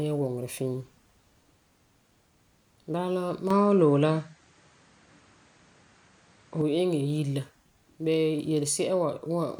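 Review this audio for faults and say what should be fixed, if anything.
From 3.50 to 6.61 s the speech turns duller, with nothing above 8.9 kHz, shifts level by about 5 dB and gains faint new background noise: likely an input switched to a poorer device. Lock the recording input to one microphone so the system cannot change devices mid-take.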